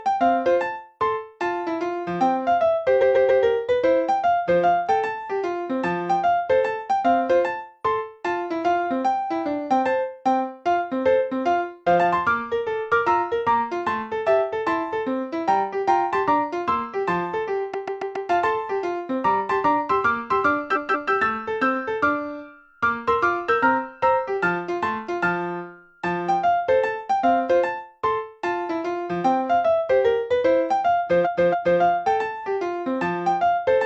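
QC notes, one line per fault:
2.98–3.39 s, 17.70–18.25 s, 20.72–21.09 s, 31.21–31.77 s: repeated frames. A short run of compressed frames was sent again, so a block of 139, 139, 186 and 279 ms replays two to four extra times, each stuttering, adding 0.37–0.56 s.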